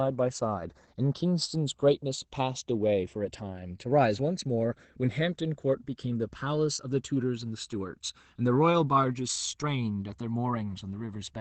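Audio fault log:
throughout, channels drifting apart: the two channels run on clocks mismatched by around 100 ppm, so their offset grows to about a millisecond, sweeping comb notches as slow flanging.
throughout, Opus voice compression: SILK linear-prediction coding, consistent with roughly 12 kbps, keeps wideband speech up to 8 kHz but coarsely codes excitation, leaving it plainly hoarse and slightly robotic.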